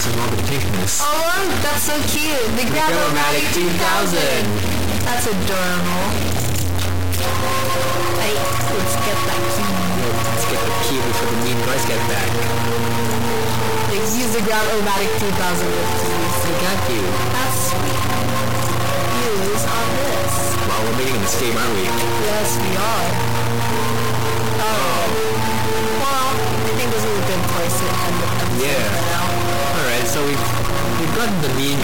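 From start to finish the audio carries a harsh, buzzy distortion that points to a stuck bit, likely a single data line or converter bit held at a fixed value. Each affected sample is pushed off by a step of around -15 dBFS, a high bit, so even the quiet gaps fill with fairly loud noise. That noisy silence sets it apart from clipping, which distorts only the loud peaks and leaves pauses clean.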